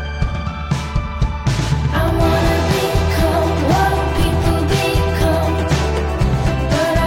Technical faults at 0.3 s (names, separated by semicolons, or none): none